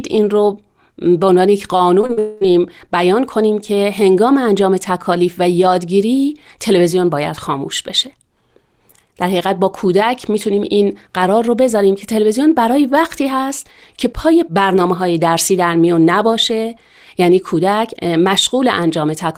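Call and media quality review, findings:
Short concealed packet loss, 2.01–2.05 s: brief smear in the speech. About 20 ms of audio missing, roughly 14 ms synthesised from the preceding sound. Jitter buffer/decoder concealment. 2.07–2.11 s: same symptom, 20 ms missing and filled. 2.13–2.19 s: longer wobble, 40 ms missing, 40 ms concealed. Receiver extends the last pitch or noise, then cross-fades back. Three gaps in about 0.17 s point to a burst on the network path.

Long network dropout, 2.19–2.43 s: directly follows the third gap. Sound becomes a sustained buzz or hiss that decays over about 220 ms, with no true silence. The original 220 ms is never played. Likely cause: a network outage starving the receiver of packets. Concealment extends the last sound until the stream resumes. Speech picks up afterward with that stretch lost.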